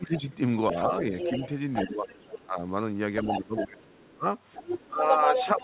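Right from the start, 0 to 0.27 s, the talker dips by about 10 dB. That's speech suppressed in double talk, likely the echo canceller ducking everything because it couldn't tell the near talker from the loudspeaker echo. From 0.71 to 2.42 s you can hear the other side's voice leaking through, about 5 dB under the talker. That's likely residual echo the canceller didn't fully remove. Inside that stretch the talker gets squashed again at 1.88 to 2.09 s, by about 10 dB, and right after it at 2.43 to 2.6 s, by about 15 dB. The leak comes back at 3.21 to 3.66 s, still about 5 dB down. The worst ducking runs from 3.38 to 4.26 s, with the talker pulled down by as much as about 25 dB. From 4.54 s to the end the leaked voice sits at roughly the talker's level, and from 4.57 s the talker is suppressed by about 15 dB. The whole thing rides the narrowband G.711 call path, so there's nothing above 4 kHz.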